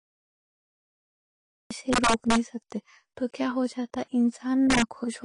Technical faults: AAC compression; cut-off start; integer overflow

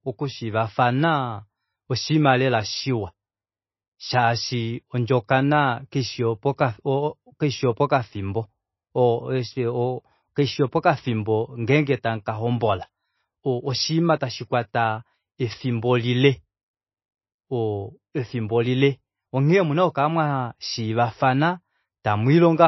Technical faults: MP3 compression

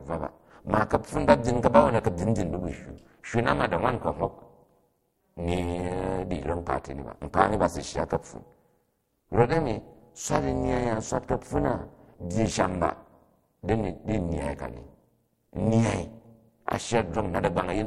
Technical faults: overlap-add ripple

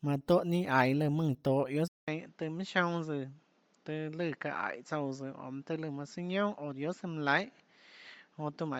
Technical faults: Bluetooth LC3 compression; input switched to a poorer device

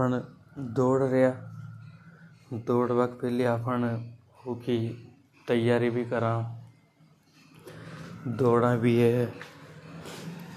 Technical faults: none

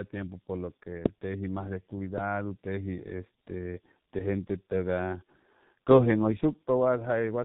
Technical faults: tandem speech coding; loud pop

